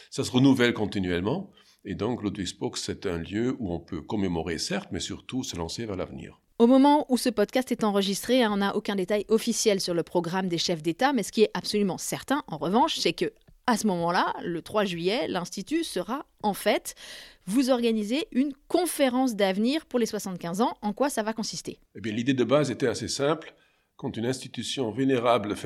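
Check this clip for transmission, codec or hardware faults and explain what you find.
No transmission, codec or hardware faults can be heard anywhere in the speech, and the signal holds a continuous, stable state throughout.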